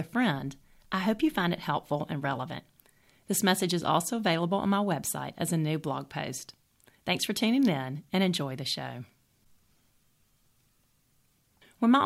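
At 2.50 s the speech skips forward abruptly, with roughly 20 ms of audio gone and the two sides butted together without a gap. This is audio missing between chunks, likely from a processor working in 4.0 s blocks and dropping material at the changeover.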